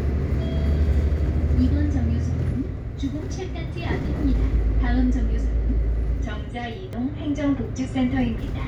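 At 0.35 s and again at 6.93 s the sound jumps, most likely a dropped buffer (overrun) that lost roughly 20 ms each time. The waveform shows an abrupt discontinuity with no gap, and the spectrogram shows a thin vertical broadband line.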